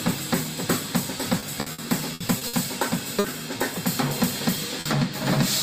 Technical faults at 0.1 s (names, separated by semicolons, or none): none